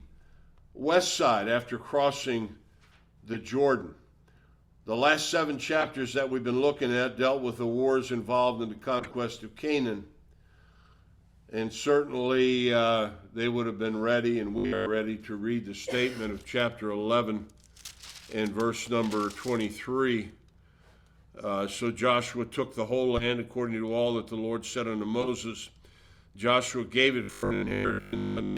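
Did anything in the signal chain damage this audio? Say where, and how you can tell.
Yes. At the codec stage, damaged compressed frames were decoded and played anyway. Short bursts of misplaced energy, heard as chirps and blips, appear at 3.33–3.36 s, 5.81–5.90 s, 8.99–9.14 s, 23.17–23.26 s and 25.21–25.29 s, each lasting a few frames.

At the driver or buffer stage, the robotic sound from repeated short buffers is likely the result of audio arriving too seldom. It appears at 14.58–14.88 s and 27.23–28.57 s as a rigid, metallic 50 Hz buzz, which fits 20 ms chunks replayed in place of most of the real sound.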